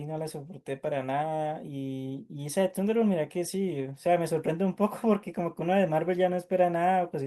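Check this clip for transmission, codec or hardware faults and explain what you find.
No faults found in this recording.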